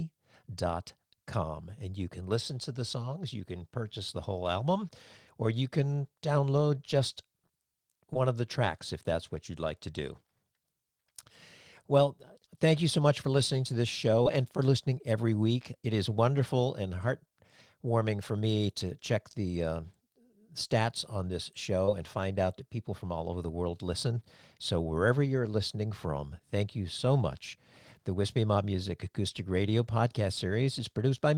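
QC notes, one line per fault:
8.13–8.18 s: short concealed packet loss. About 20 ms went missing just before "of the tracks if". The gap was filled from the preceding sound, leaving a brief smear.
14.23–14.28 s: short concealed packet loss. Between "for listening to this" and "and for listening every", roughly 17 ms was reconstructed by extending the last sound. It is heard as a brief wobble.
21.85–21.89 s: short concealed packet loss. After "stats on this", around 20 ms dropped out. The repair blends back in before "and find out that".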